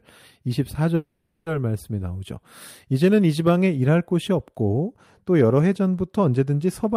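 A speech clip with two faults. From 0.95 to 1.48 s the sound stalls in a call audio freeze. The last sound is drawn out as a fading buzz or hiss for about half a second, and the talker then resumes exactly where they stopped, so a gap has been inserted without losing any speech. The likely cause is packets held up in transit until the receiver's jitter buffer ran dry. On a spectrogram this looks like a smeared, decaying band with no new structure until speech picks up again. On the waveform it is a tapering stretch. From 4.64 s to the end there is channel delay (comb filtering). One channel is late by roughly a single sample, and when the two are summed to mono the common content cancels near the top of the band. The first notch sits at roughly 20 kHz, so the result is a dulled, slightly softened top end rather than an obvious hollowness. A spectrogram shows the highest frequencies fading toward that notch for this whole final section.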